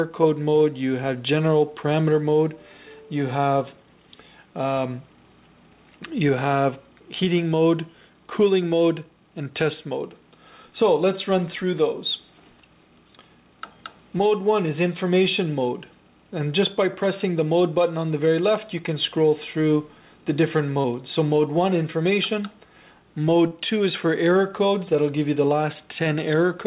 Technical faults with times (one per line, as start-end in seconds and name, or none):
20.81-20.87 short concealed packet loss
23.48-23.54 short concealed packet loss